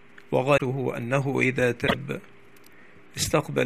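At 0.57 to 0.62 s and again at 1.86 to 1.95 s the audio skips ahead and briefly turns into a chirp, a burst of noise or a short hole, the likely result of a broken MP3 bit reservoir. Frames were dropped, so the next frame borrowed bits from bytes belonging to another frame. The disruptions last about two and four 24 ms frames. On a spectrogram each shows as a short, disturbed patch, and the waveform shows a discontinuity.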